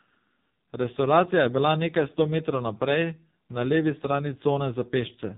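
Throughout, the speech carries heavy AMR narrowband mobile codec damage: a buzzy, synthetic vocal-tract model, which fits a low mode near 5.9 kbps. On a spectrogram, nothing appears above 3.8 kHz.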